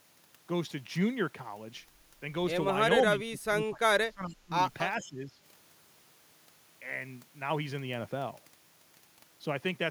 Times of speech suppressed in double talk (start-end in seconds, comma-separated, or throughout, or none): 3.24-4.58, 4.99-5.40